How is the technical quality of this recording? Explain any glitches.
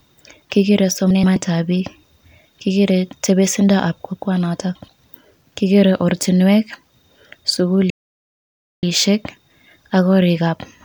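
The speech carries two kinds of playback fault.

Frames out of order occur at 1.10 to 1.36 s and again at 4.75 to 4.88 s. In each spot, two neighbouring runs of frames were decoded in swapped order: 128 ms runs the first time, 64 ms runs the second. This points to groups of about four and two frames. The stretch plays with its halves exchanged, giving a brief garbled flutter. No time is lost.

A playback stall runs from 7.90 to 8.83 s. The sound cuts off mid-flow and stays silent for about 0.93 s before continuing. The likely cause is the player running out of data, or its thread being blocked, until it recovered.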